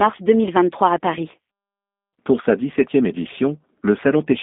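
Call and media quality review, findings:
Speech rough, slightly synthetic and buzzy for the whole clip; dull, telephone-narrow, nothing above about 3.7 kHz, line band roughly 200 Hz to 3.6 kHz. Probable component: G.729 codec, consistent with the 8 kbit/s G.729A variant. Mechanism: each 10 ms frame resynthesized from a vocal tract filter, pitch predictor and a few pulses per half-frame, so fine detail and harmonic texture are lost and the damage is plainly audible.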